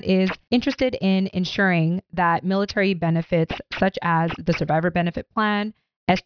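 Aliasing runs through the whole clip, from start to finish. The audio was brought down to a lower sample rate without an anti-aliasing filter first. Everything above the new band edge folds back at 5.5 kHz, which fits a drop from 44.1 kHz to around 11 kHz. The mirrored energy sits roughly 20 dB below the speech, at pitches unrelated to it. Sibilants sound gritty and metallic, and the top of the spectrum stays dense right up to the fold.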